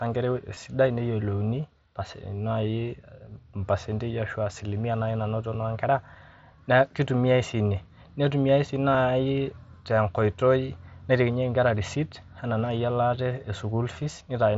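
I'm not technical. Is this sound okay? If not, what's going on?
No, not quite. At 0.55 s and again at 8.93 s, the wireless link between the headset and the phone briefly dropped a bit of the speech. This is concealed Bluetooth headset packet loss. Each gap is tiny, about 15 milliseconds, which fits a couple of lost packets. The phone papered over it by repeating a closely matching sliver of the speech just before, so each moment is brief. The headset's mSBC codec carries the speech up to 8 kHz.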